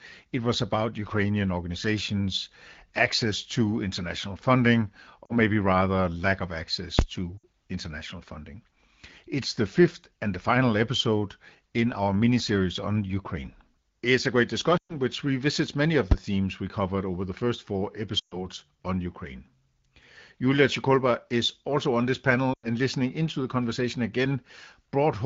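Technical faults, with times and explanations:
5.25–22.67 s, lost AMR speech frames: concealment gaps at 5.25–5.36 s (40 ms), 7.38–7.44 s (60 ms, between "lack of access to" and "international funding"), 14.77–14.94 s (120 ms), 18.19–18.47 s (120 ms) and 22.53–22.67 s (100 ms). Each gap is heard as the voice dropping to near silence within two frames, the way the AMR-WB decoder behaves when it repeats the last good parameters with falling gain. The sound returns briefly weak or rough.
6.99–7.01 s, invalid numbers at full scale: between "rather lack of access" and "to international funding", the output jumps to one extreme value, far beyond the speech peaks, for about 23 ms, which fits a 1024-sample block. It is heard as a loud, abrupt pop.
16.12 s, invalid numbers at full scale: between "which revisits many of" and "themes we covered over", there is a spike to one extreme value of about 6 ms, consistent with a 256-sample block. 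It is heard as a single sharp bang.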